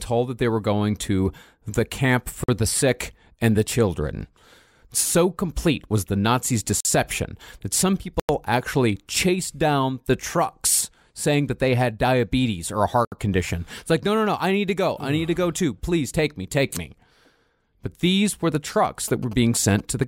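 At 2.44, 6.80, 8.20 and 13.05 s the speech drops into blocks of digital silence. They last 46, 46, 93 and 70 ms. The output buffer likely went unfilled, and the first two fit a 2048-sample buffer. Each gap sounds like a short hole.

From 18.85 s to the end come GSM signalling bursts from a nearby phone. The audio circuit rectified its radio pulses. The result is a galloping ticking buzz at 217 Hz, roughly 20 dB below the speech.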